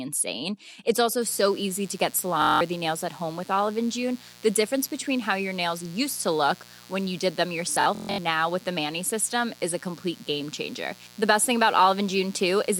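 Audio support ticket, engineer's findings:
Mains buzz, 1.21 s to end. Steady raspy buzz on 60 Hz, around 25 dB under the speech. Switching spikes twice per mains cycle, from a dimmer, rectifier or unshielded run, leak in and spread harmonics up into the kHz range.

Bluetooth stutter, 2.42 to 2.61 s. About 186 ms dropped; receiver loops its last short slice, giving a machine-gun buzz, which fits roughly eight lost packets. Speech resumes further on, as if it had kept playing.

Bluetooth stutter, 7.72 to 8.19 s. About 302 ms lost, scattered across 464 ms, longest run 139 ms. Same buffer-repeat mechanism, pointing to a loss of around thirteen packets.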